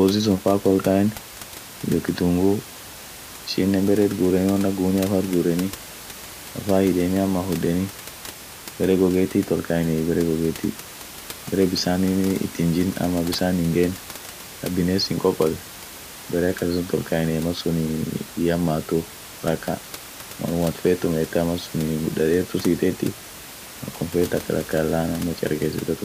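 No technical faults are audible.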